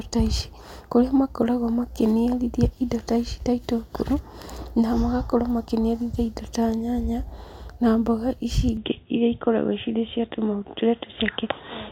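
At 8.77 s, just after "nyanya na mboga ici", the recording likely switched its input to a poorer device. From there to the end, nothing reaches above 3.8 kHz, so the speech turns dull and boxy without any gap, at much the same level, over a faint new background noise.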